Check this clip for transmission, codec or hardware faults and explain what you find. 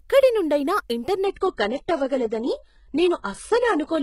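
There's one fault. From 1.25 s to the end, the adaptive stream switches to a lower bitrate: the treble dulls abruptly above about 11 kHz with no gap, likely a throttled connection, sounding like a heavily compressed low-rate codec.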